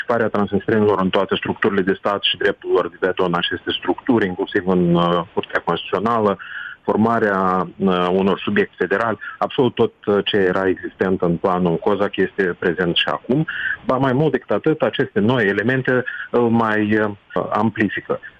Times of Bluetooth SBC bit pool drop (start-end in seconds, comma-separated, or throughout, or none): none